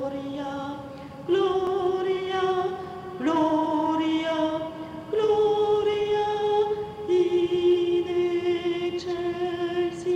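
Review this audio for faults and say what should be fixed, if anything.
The capture software likely fell behind and let the hardware overwrite unread samples, a dropped buffer (overrun), at 1.67 s and 2.84 s. Each time about 5 ms vanishes and the sound jumps straight ahead. Prevent it with larger buffers or higher-priority audio threads.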